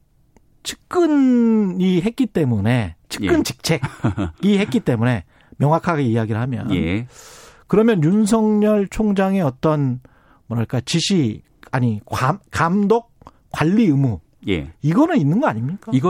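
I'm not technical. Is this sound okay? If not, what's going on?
Yes, this one's fine, with no technical problems anywhere in the recording.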